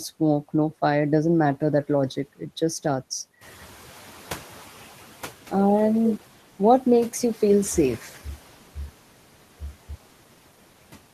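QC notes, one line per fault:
throughout, noise suppressor artifacts: the suppressor pulls down the bands it treats as steady noise by about 11 dB, frame by frame, so the background sinks in the gaps and returns under the speech.
3.41–4.96 s, noise suppressor catching up: right after "just starts" the room noise jumps by about 12 dB, and the suppressor's noise estimate trails it. The louder background first passes with only about 8 dB of reduction, then settles over 1.55 s as the estimate adapts.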